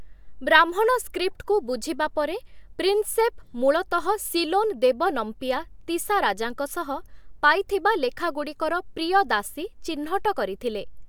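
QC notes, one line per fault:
Nothing to flag here; the speech comes across without any technical faults at all.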